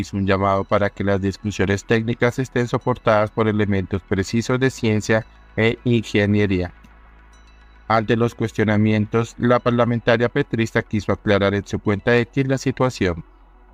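No technical faults are audible anywhere in the audio.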